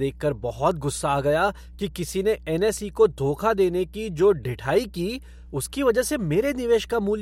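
Power-line interference has leaked into the signal path for the entire length of the speech, most likely through a ground loop or a transformer close to the equipment. The result is mains hum: a steady low tone at 60 Hz, with a few low harmonics above it, sitting roughly 20 dB below the speech. It stays constant whether the talker is speaking or pausing.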